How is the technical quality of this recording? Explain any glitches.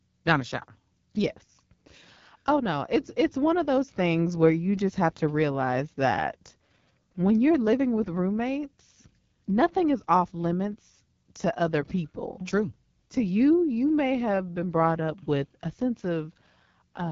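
Technical quality is limited by audible codec damage across the whole recording. The speech has passed through the AMR wideband (HD Voice) codec at one of its lowest rates, and the coding artefacts are plainly audible from start to finish.

Throughout, the speech sounds rough and raspy. Nothing is present above about 7.2 kHz. The codec models speech below 6.4 kHz as pulses driving a vocal tract filter and fills the upper band with shaped noise. The coarseness fits the 8.85 kbit/s mode.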